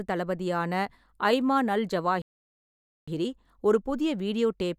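A speech clip with a playback stall. At 2.22 s the sound cuts out in mid-flow. Silence follows for about 0.86 s. The speech resumes at 3.08 s. The player likely ran out of data or had its thread blocked.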